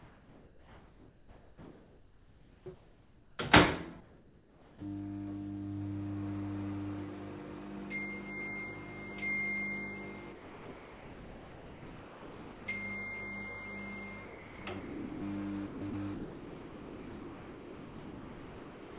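From 0.0 to 2.66 s, sound is dropped by the voice detector. About 1.2 s of real sound is missing, with steady noise in its place. The sender likely judged it background and stopped sending. From 0.0 to 3.37 s, comfort noise replaces the background. The real ambience is swapped for a smoother noise of a different tone or level. That points to likely discontinuous transmission, with the receiver filling the gap. Sound drops out again from 4.01 to 4.81 s, losing roughly 0.4 s, which is likely the same detector misjudging. From 10.32 to 12.66 s, the whole 2.3 s stretch likely went unsent and became synthetic noise. From 14.25 to 15.21 s and from 15.66 to 18.97 s, the sound is chopped by the voice detector. It likely toggled repeatedly, so pieces vanish into comfort noise. Everything sits within a band ending at 4 kHz.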